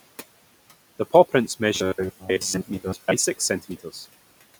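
Throughout, noise suppressor artifacts are present: the background dips by about 17 dB between phrases and returns under speech, unlike steady room noise, which sits about 19 dB below the speech. From 1.75 to 3.13 s, the speech turns into a rigid metallic buzz at 93.8 Hz, likely from short buffers of about 10.7 ms being replayed while most of the real audio is skipped. Its fixed pitch distinguishes it from the suppressor's irregular warble. Between 3.39 and 3.95 s, speech cut by the noise suppressor swallows about a tenth of a second of soft sounds, dropping them by up to about 13 dB. These are faint, brief losses, not a buzzing replacement.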